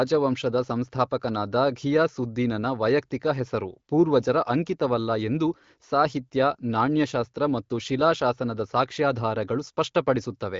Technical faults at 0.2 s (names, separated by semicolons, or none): none